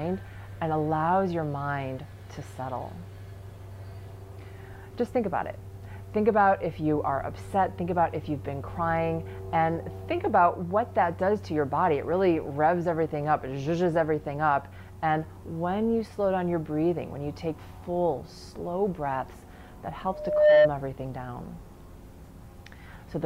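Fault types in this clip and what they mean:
Loudspeaker feedback squeal: a single 604 Hz tone swells over roughly 0.4 s from 20.12 s and rings about 10 dB above the surrounding sound until 20.71 s, because a microphone heard its own loudspeaker and the loop gain at that pitch rose above one.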